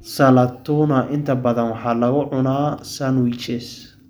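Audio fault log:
No fault to log.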